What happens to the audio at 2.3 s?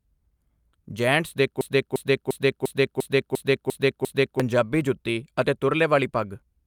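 A broken-record loop is playing. From 1.61 s to 4.40 s, one fragment of about 0.35 s repeats exactly, back to back, eight times. The stream likely stalled and kept resending its last held piece. The speech meant for those seconds is lost.

Underneath, repeated timing corrections run from 0.21 s to 6.67 s. The receiver keeps trimming short pieces to keep up at 104% speed.

They come from clock drift between sender and receiver. The sender's clock runs roughly 4% fast. The jitter buffer keeps overfilling, so the receiver must cut audio repeatedly throughout the clip.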